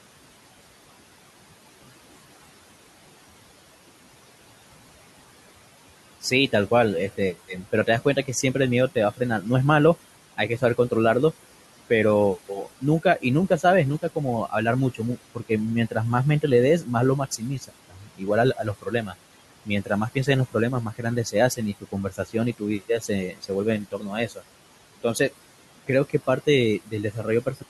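Throughout the clip the background sinks between phrases and swells back under them: noise suppressor artifacts, the steady room noise being pulled down by about 17 dB frame by frame. From 7.17 to 10.92 s, soft speech sounds fade and become faint in short spots totalling a fraction of a second. This is speech cut by the noise suppressor, with drops of up to about 14 dB. The same swallowing is heavier from 12.49 to 24.43 s, where about three seconds in all is turned down by up to about 18 dB. It returns briefly from 25.87 to 27.63 s, with dips of up to about 16 dB.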